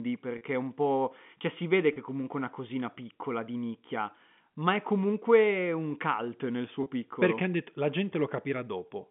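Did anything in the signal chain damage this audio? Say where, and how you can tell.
Yes. Packet loss with pitch repetition hit the network stage. Gaps of 30 ms occur at 0.38, 1.93 and 6.83 s, which fits three lost 10 ms packets each. The receiver repeated the last pitch period to fill them. Each sounds like a brief, buzzy held note.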